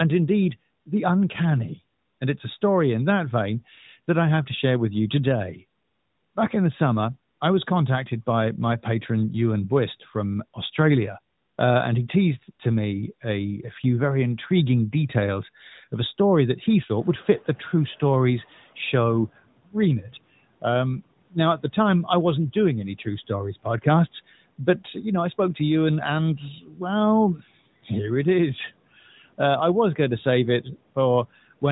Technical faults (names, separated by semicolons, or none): noise suppressor catching up; speech cut by the noise suppressor